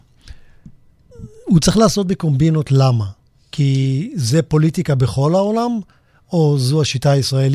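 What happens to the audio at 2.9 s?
At 2.9 s the speech carries on intact, with no dropout, click, distortion or other disturbance at that point.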